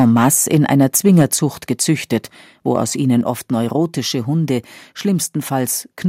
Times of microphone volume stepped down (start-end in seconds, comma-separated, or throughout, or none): 1.22, 3.21